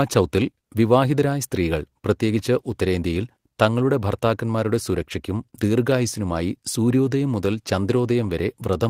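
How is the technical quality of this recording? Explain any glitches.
Nothing in the recording registers as a technical fault, so there are no glitches to account for.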